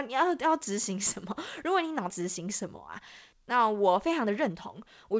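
A speech clip with a skip ahead at 2.10 s, where roughly a second of audio is dropped and the two sides are spliced almost directly. On the waveform this shows as an abrupt, gapless join, and on a spectrogram as a sudden discontinuity in the formant tracks with no silent column. Jitter buffer speed-up follows from 2.20 to 3.00 s at 109% and again from 3.80 to 5.14 s at 111%. The receiver is trimming pitch-period-sized pieces to shed excess buffered delay, removing a few tenths of a second in all. Speech sounds hurried but keeps its pitch. A spectrogram shows syllables compressed in time while harmonic spacing stays unchanged. Throughout, energy stops at 8 kHz, consistent with the G.722 call codec.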